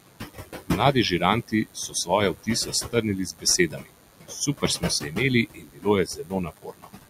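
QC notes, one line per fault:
Throughout, DECT cordless phone buzz: a thin, steady buzz at 100 Hz, rich in harmonics, sits about 15 dB under the speech. A nearby DECT handset or base transmits a radio burst every 10 ms, and the audio circuitry rectifies each burst into sound.
Throughout, noise suppressor artifacts: the background, including room noise about 9 dB below the speech, ducks in the gaps and swells under the talker as the suppressor attenuates bands frame by frame.
0.00–0.95 s, 1.42–2.10 s, 2.34–2.49 s, 2.65–5.18 s, 5.46–5.87 s, 6.05–7.09 s, speech cut by the noise suppressor: soft consonants and word endings sound swallowed, dropping by up to about 21 dB. The suppressor misread these quieter speech parts as noise and attenuated them, over several seconds in total.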